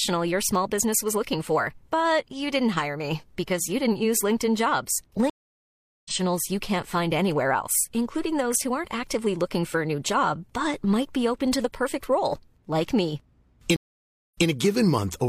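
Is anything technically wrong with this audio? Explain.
Yes. The speech has two stream reconnect faults. At 5.30 to 6.12 s the audio drops to silence for about 0.75 s. It resumes roughly 0.7 s further on, just before "you can't find anywhere", so a stretch is skipped. At 13.76 to 14.47 s, after "perfect role like me", a 0.57 s gap follows. Playback then restarts 0.14 s earlier, repeating a sliver. Each time the connection broke, the player reconnected and started a fresh decoder mid-stream, so the join is a jump rather than a smooth continuation.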